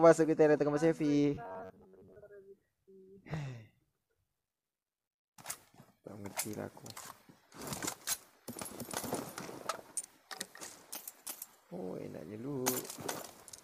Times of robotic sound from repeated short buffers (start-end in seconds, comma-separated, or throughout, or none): 1.35-2.16